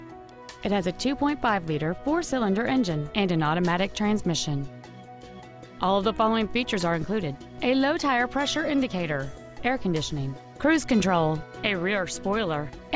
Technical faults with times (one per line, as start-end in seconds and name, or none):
none